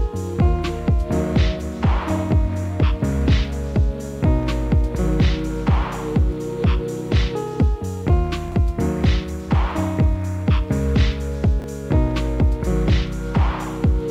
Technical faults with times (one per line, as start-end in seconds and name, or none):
8.48-8.54 chunks out of order
11.60-11.64 chunks out of order